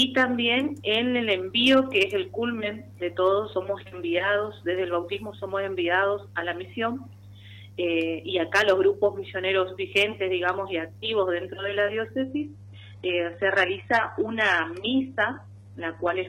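At 12.23 s the stream drops to a lower bitrate and stays there until the end of the clip at 16.28 s. The change is abrupt, with no gap in the audio. The connection likely slowed, so the player switched to a cheaper encoding. The top end is cut off above 18.5 kHz, and coding artefacts rise. This fits a step from roughly 96 kbit/s AAC down to HE-AAC near 16 kbit/s.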